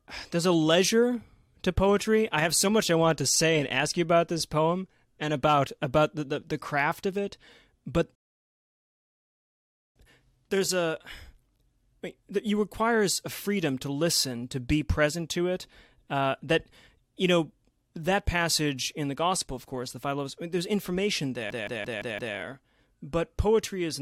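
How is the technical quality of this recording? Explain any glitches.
Two glitches interrupt the speech, one of each kind, and neither removes any of the recording.

From 8.15 to 9.96 s there is a rebuffering stall. The player ran out of downloaded audio and waited for more, so the sound drops to silence for about 1.8 s and then resumes at exactly the point where it stopped. Unlike a dropout, which cuts material out, a stall only adds time. Nothing is skipped, and the speech continues as if uninterrupted.

From 21.50 to 22.36 s there is a system hang loop. The computer or audio driver froze while the sound hardware kept replaying the same ring buffer. A 171 ms slice, which fits an 8192-sample buffer, repeats exactly five times at about 5.9 repeats per second. Because the slice is fairly long, the result is a machine-gun stutter of identical fragments rather than the steady buzz a very short buffer would produce. 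Essentially no audio is lost before normal playback returns.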